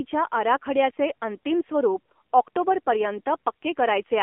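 From start to finish the speech carries AMR narrowband mobile codec damage. The band is squeezed to roughly 250 Hz to 3.4 kHz, and the frame-by-frame vocal-tract model with its sparse pulse excitation leaves the voice plainly buzzy and synthetic, which fits a low AMR-NB mode around 7.4 kbps. On a spectrogram everything above 4 kHz is empty and nothing sits below 250 Hz, with smeared, blocky harmonics inside that band.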